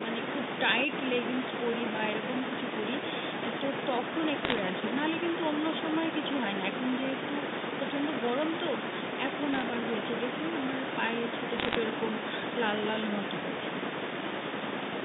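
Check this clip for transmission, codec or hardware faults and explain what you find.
There's one fault here: three short bursts of bit errors on a digital phone line, at 4.45 to 4.59 s, 9.53 to 9.62 s and 11.58 to 11.75 s. Flipped bits each corrupt a single sample, and a hit on the sign or a high-order bit throws that sample far off, giving a sharp tick. At an error rate of roughly 0.5 to 0.7 percent, the ticks pile into a brief crackle sitting over the speech, which is unchanged underneath. The line itself sounds like G.711 A-law telephone coding, band-limited to about 200 Hz to 3.7 kHz.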